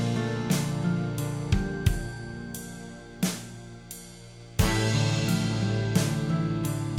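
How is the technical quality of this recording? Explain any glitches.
The music has no audible glitches or faults.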